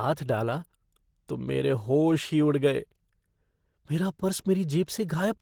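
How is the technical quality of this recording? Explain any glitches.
The technical quality is limited by one fault that runs through the whole speech clip: plainly audible codec damage.

Opus compression, throughout: the likely cause is Opus at a low bitrate, with a texture that fits about 16 kbps in hybrid mode. Here the lower band is coded as speech and the upper band is filled from band energies rather than exact detail. The result sounds hoarse, rough and grainy, with a noisy upper range, even though the bandwidth stays full and only the content above about 20.2 kHz is missing.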